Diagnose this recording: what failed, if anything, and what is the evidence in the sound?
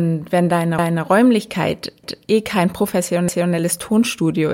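Overlapping chunks at the buffer stage: the speech stutters at 0.79, 2.04 and 3.29 s, each time replaying a 250 ms slice. Each 1-second block starts before the previous one ends, so that quarter-second plays twice at every join.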